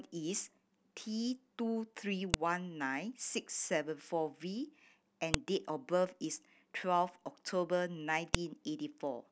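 At 2.34, 5.34 and 8.35 s the speech carries a sharp, loud click: a file header played as audio. The header bytes of each joined piece, spaced 3.0 s apart, were decoded as samples, producing a brief snap independent of the speech.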